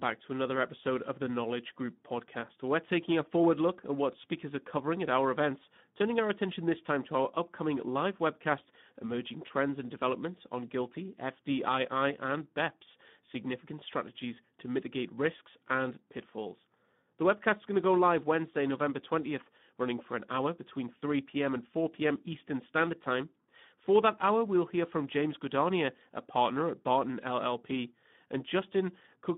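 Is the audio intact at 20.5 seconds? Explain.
No, the Speex codec damage runs through the whole clip, 20.5 s included: starved CELP excitation, likely an 11 kbps setting, leaves the speech hoarse and noisy, squeezed into a 150 Hz to 3.6 kHz band.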